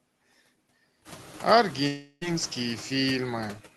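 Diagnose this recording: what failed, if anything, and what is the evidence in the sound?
Call processing: noise suppressor artifacts throughout. Between phrases the background drops by about 16 dB and pumps back under speech, with the room noise rising around 1 s.

Network: from 1.87 to 2.23 s the sound smears into a fading buzz, then resumes with that 0.34 s simply gone. That's likely a long network dropout, with concealment filling the whole gap.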